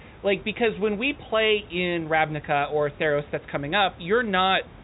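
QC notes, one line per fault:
No faults to note.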